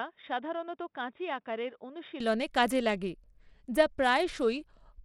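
For the first 2.2 seconds the speech sounds dull and boxy, with nothing above 3.8 kHz, a level roughly 10 dB lower and a faint new noise floor. At 2.20 s, just before "কাজে লাগে", it clears with no gap. That pattern likely means the input switched to a poorer device and then back.

Throughout the clip a gritty roughness rides on the speech, and the treble flickers and drops out, plainly audible. This likely comes from Bluetooth SBC compression at a bit pool that fits about 96 kbps. Too few bits reach the upper sub-bands, and the remaining bands are coarsely quantised.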